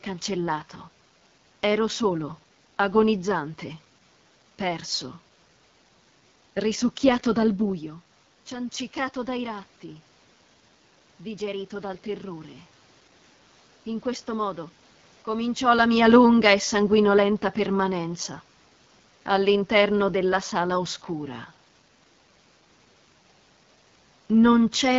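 From start to finish the speech carries the sound of the AMR wideband (HD Voice) codec running at one of its lowest rates, which fits a bitrate near 8.85 kbit/s. The model of the vocal tract and its pulse excitation are given too few bits, so the voice comes through rough and raspy, with plainly audible damage. On a spectrogram, content stops sharply at about 7.4 kHz, and the top band from 6.4 kHz upward looks like a smooth noise wash rather than real harmonic detail.

At around 7.5 s the talker moves away from the microphone, and the input drops by about 10 dB. From 8.5 s to 14.66 s the automatic gain rises in response. The control reads the input as too quiet and slowly turns its gain up by about 5 dB, which makes up only half of the drop. Voice and room noise swell together over those six seconds. On the waveform the envelope ramps upward steadily instead of jumping, and the noise floor between phrases rises with it.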